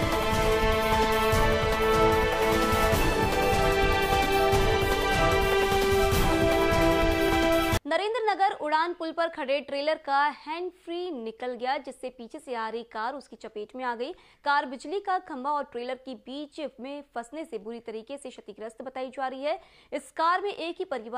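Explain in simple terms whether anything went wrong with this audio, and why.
Nothing went wrong with this audio: there are no dropouts, glitches, jumps or other technical faults anywhere in the recording.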